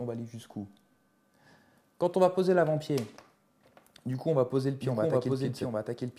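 A doubled audio track enters abruptly at 4.82 s and runs to the end of the clip. A second full-band copy of the audio trails the original by roughly 0.7 s, at about the same level. It has no decay or room colouring, so it sounds like a plain repeat rather than an echo. The likely cause is the same signal being captured again through a slower path, or an edit leaving two out-of-step copies overlapping.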